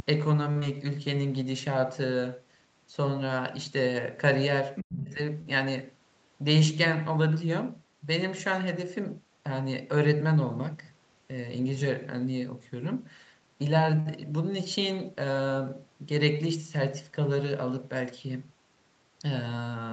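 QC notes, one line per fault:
throughout: DC offset. The whole waveform sits shifted off zero by a constant amount. You won't hear it as such, but it eats into headroom and shows up as a steady lump of energy right at the bottom of the spectrum. Note that nothing above 8 kHz reaches the file, because the call path band-limits the audio there. That isn't part of this problem. A simple high-pass or DC removal would clean up the offset.
0.51–0.57 s, 5.42–5.48 s and 14.00–14.08 s: short stall from a late packet, three times. Each time a packet turned up late, the jitter buffer ran dry, and the receiver held the last bit of sound until the audio caught up. The stretches are about 41 ms, 49 ms and 58 ms. Nothing is actually lost, but each one sounds like a brief hang with a faint buzzy or dipped quality. Each also adds that much delay.
0.59–0.64 s: short concealed packet loss. Right after the first stall, about 20 ms of audio never arrived. 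The receiver papered over the hole by carrying the previous sound forward and then blending back into the real signal. You get a tiny smear or wobble here rather than a clean gap, and whatever fell in that 20 ms is gone.
4.75–4.83 s: other side's voice leaking through. A short scrap of a second voice comes through at about 10 dB below the main talker. The likely cause is the talker's loudspeaker playing the far end while the echo canceller failed to strip all of it from the mic pickup. The leak is brief, under a tenth of a second.
4.82–5.19 s: speech suppressed in double talk. Straight after that leak, the main voice sags hard for roughly 400 ms and drops by something like 40 dB at the deepest point. This is likely the echo canceller getting confused with both sides active at once and turning everything down together, which takes the wanted voice down with the echo.
10.67–10.91 s and 13.09–13.55 s: jitter buffer speed-up. 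The buffer was holding more than its target. To drain it, the receiver snipped out lots of tiny pitch-period-sized pieces in a row. The first run plays at about 112% speed and drops around 40 ms. The second runs at about 111% and drops around 50 ms. Pitch stays put, but the delivery sounds briefly rushed.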